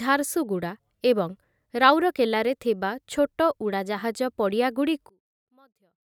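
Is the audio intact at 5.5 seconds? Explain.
No. From 5.09 to 6.16 s the speech collapses by about 36 dB to a faint residue. The likely cause is one channel inverted, so the shared centre cancels when the channels are summed. Unlike a dropout, it is not silent.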